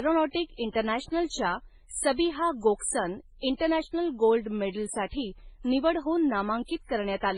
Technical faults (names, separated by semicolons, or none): transcoding between lossy codecs